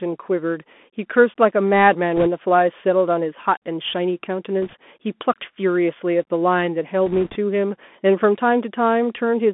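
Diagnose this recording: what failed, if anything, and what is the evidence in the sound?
Codec stage: the whole speech clip passes through a Bluetooth CVSD headset codec, which fits a 64 kbps one-bit delta stream. On a spectrogram, energy sits between about 200 Hz and 3.5 kHz with nothing above. Sibilants sound scratchy, loud high content distorts because the adaptive step lags behind it, and a granular hiss lies underneath.

Link stage: bit errors on a Bluetooth voice link occur at 2.16–2.27 s, 4.62–4.76 s and 7.06–7.36 s. Each flipped bit moves the delta decoder by one step, whose size grows with the speech level, and the error dies away fast, so the waveform shows no spikes. Instead there is a smeared, crackly noise haze, strongest in the first burst (around 3 percent errors) and lighter in the later two.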